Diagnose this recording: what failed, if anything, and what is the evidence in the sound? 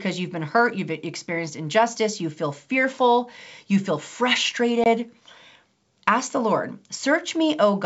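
Packet loss on an ADPCM call, at the network stage, 4.84 to 4.87 s: a hard-edged 20 ms hole, about a couple of packets, filled with silence. The wideband G.722 speech then resumes with slight distortion while the decoder's predictor and step size resynchronise.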